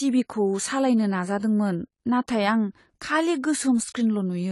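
Speech running throughout with AAC compression damage, likely from a low-bitrate encode near 32 kbps: the spectrogram stops abruptly at about 11.5 kHz, with dull, smeared, fizzy sibilants.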